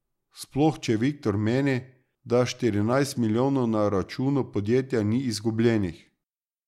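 From 1.26 s to 6.26 s a click recurs every 1.67 s, about four in all, from clock drift buffer slips: two clocks likely disagree by a couple of hundred ppm, so a short block of samples is dropped or repeated. The strict regular spacing distinguishes it from random dropouts.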